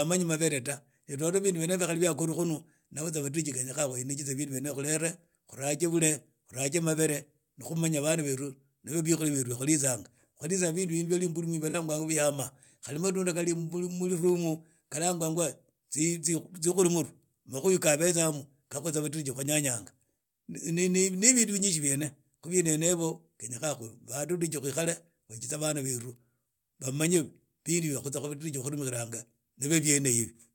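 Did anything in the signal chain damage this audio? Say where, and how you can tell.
Yes. At the codec stage, the speech smears into a brief noisy, phasey patch from 11.69 to 11.75 s, about 43 ms, consistent with two lost AAC frames. This is AAC frame loss with concealment: the decoder rebuilt the gap from the previous spectrum. A buffer dropout would instead leave hard silence or clicks.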